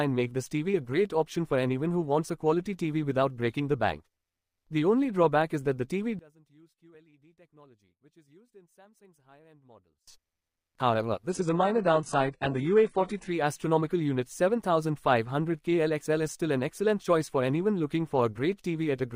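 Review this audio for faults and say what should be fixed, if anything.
Likely one channel inverted: from 6.19 to 10.08 s, the two channels cancel when summed to mono, so the sound collapses by about 30 dB to a faint residue.

Adaptive stream at a lower bitrate: from 11.3 to 13.3 s the player switched to a much leaner rendition. Treble above 11.1 kHz vanishes, which fits a very low-bitrate HE-AAC version.

To prevent this, check channel polarity before mono downmixing and set a higher minimum bitrate for the adaptive stream.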